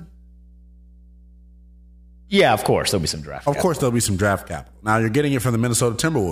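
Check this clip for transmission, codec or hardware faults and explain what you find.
A hardware fault is present: mains hum runs under the speech for the full length of the clip. A steady low tone sits at 60 Hz, roughly 25 dB below the speech level. The power-line frequency is leaking into the signal path, through a ground loop between connected equipment or through magnetic coupling from a nearby transformer. It sounds like a constant low drone, with some low harmonics above the fundamental.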